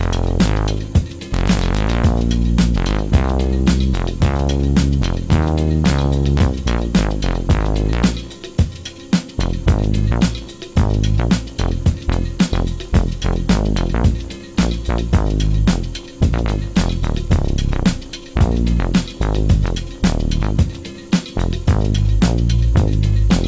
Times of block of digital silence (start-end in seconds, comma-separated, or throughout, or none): none